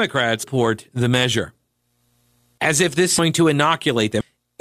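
At 0.43 s, 2.58 s, 3.18 s and 4.21 s the speech jumps forward as compressed frames are skipped. Whole frames, which fit a 32 ms frame length, never reached the output. Before "the measure" and at 2.58 s, roughly 0.7 s of speech is missing; at 3.18 s and 4.21 s, nearer 0.4 s. At each join the speech jumps ahead past the missing frames.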